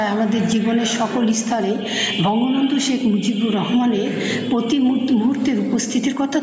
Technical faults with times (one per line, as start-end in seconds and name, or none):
0.00-6.43 gain pumping